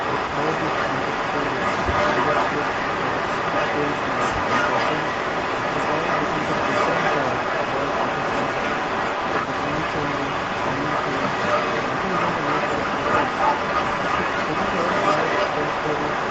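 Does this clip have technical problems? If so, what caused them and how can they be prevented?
Yes. An echo leak runs through the whole clip: a delayed copy of the speech trails it by about 282 ms and sits roughly 5 dB above it. Likely cause: a far-end loudspeaker's echo canceller failed to remove its microphone pickup. Using headphones or retuning the echo canceller prevents this.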